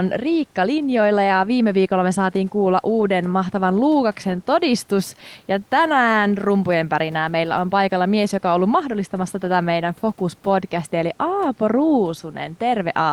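No technical faults are audible.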